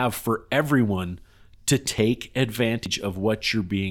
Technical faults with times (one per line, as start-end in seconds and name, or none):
1.98 dropped buffer (overrun)
2.86 dropped buffer (overrun)